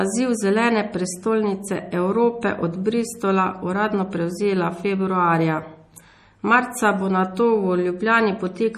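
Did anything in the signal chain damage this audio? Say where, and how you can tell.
Yes, at the codec stage, likely MP3 compression: the whole speech clip sounds watery, with nothing above 15.1 kHz, which fits a starved bitrate around 40 kbps.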